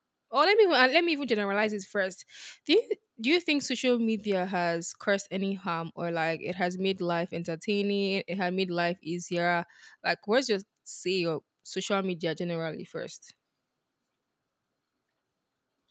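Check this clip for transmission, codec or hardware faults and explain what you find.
No faults turn up here; the speech just has the narrower top end you'd expect from a call, with nothing above 8 kHz, which is simply how the call path normally handles it.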